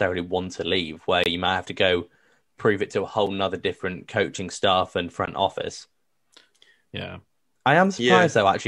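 Gaps between stream segments at 1.24–1.26 s, 3.27 s and 5.26 s, where segment timestamps fail to meet, insert hard-edged silences of 23, 6.5 and 18 ms, two seconds apart. Unlike dropouts, the speech resumes with nothing lost.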